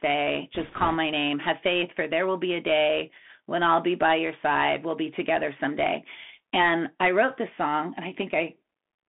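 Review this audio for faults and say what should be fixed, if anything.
Bluetooth CVSD headset codec, throughout the clip: the speech is squeezed into a narrow line band of roughly 250 Hz to 3.5 kHz, which fits a 64 kbit/s CVSD stream. Its one-bit, adaptive-step delta coding lags behind fast, loud high-frequency sounds, so sibilants come out scratchy over a grainy hiss. Recording through a wideband link (mSBC or LC3) or a wired microphone would prevent this.

Bit errors on a Bluetooth voice link, from 0.55 to 0.96 s: for about 0.4 s the speech picks up a rushing, crackly noise. Flipped bits each nudge the delta decoder slightly and then fade, so there are no sharp clicks, only diffuse roughness at an error rate of a couple of percent. Keeping the headset close to the receiver and away from 2.4 GHz interference would prevent it.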